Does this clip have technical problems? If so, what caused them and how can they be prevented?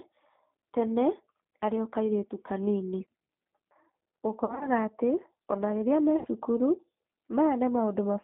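Yes. The whole recording carries G.729 codec damage, and it is plainly audible. The sound sits between about 200 Hz and 3.6 kHz, with nothing above. The codec rebuilds each 10 ms frame from a vocal tract filter, a pitch predictor and a few pulses. That gives the speech a rough, slightly synthetic grain, which fits an 8 kbit/s G.729A stream. To prevent it, carry the call on a wideband codec such as G.722 or Opus.

There is also VoIP packet loss concealed by the speech codec. The first burst runs from 4.45 to 4.69 s. About 80 ms of audio is missing, scattered over 160 ms, and the longest gap is 40 ms. The second runs from 6.19 to 6.28 s, with about 60 ms gone. In each gap the decoder stretches its last pitch and filter into a buzzy tone or coloured noise that fades. The speech stays weak briefly after the real audio returns, because each frame builds on the last. To prevent it, use a stable, prioritised network path with a jitter buffer and forward error correction.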